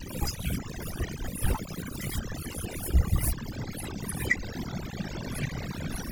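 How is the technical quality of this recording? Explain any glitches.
The main problem is overdone noise removal, present from start to finish. The noise reduction was pushed too hard, so bands sitting near its noise estimate get cut, along with quieter parts of the speech. You hear a lowered background that breaks up into twinkly specks.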